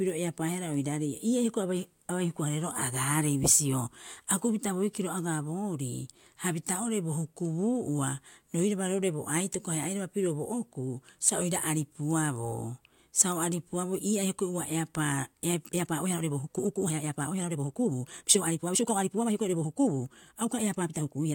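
From 15.50 s to the end of the clip at 21.34 s, the speech runs at roughly 1.53 times its earlier pace while its pitch stays where it was. The change in tempo is abrupt, and the passage sounds rushed. This points to a time-stretched section, likely produced by software squeezing the audio to fit a shorter length and keeping pitch by discarding short slices of the waveform.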